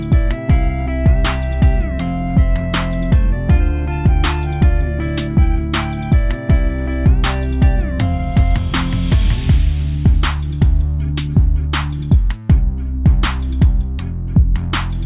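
Nothing in this audio jumps out as a technical problem; there's no dropout, glitch or distortion to point to at any moment.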